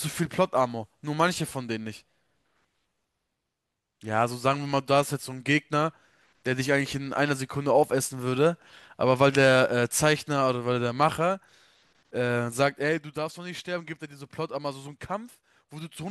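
No technical faults can be heard in this speech recording. Where the level rises or falls, it moves gradually, like a fader being eased up or down.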